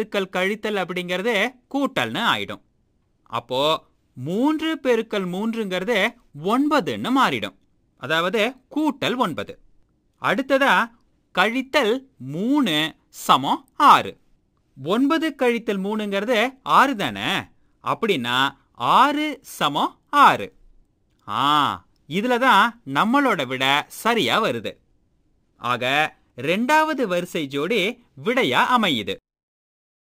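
From start to finish the audio carries crude rate conversion. The sound points to a 48 kHz to 44.1 kHz change done by simply dropping samples, with no filtering. Every so often a sample is skipped in a fixed cycle set by the two rates. That jagged timing creates shifted, inharmonic copies of the material. They sit roughly 25 dB below the signal. The result is a gritty, inharmonic fizz that rides on loud and bright passages.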